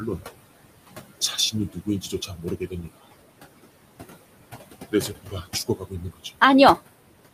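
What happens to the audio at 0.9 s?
At 0.9 s the background noise ducks away in the gaps and swells back under the speech. These are noise suppressor artifacts, present throughout: the processor pulls bands it judges steady noise down by about 20 dB, frame by frame, against room noise about 11 dB below the speech.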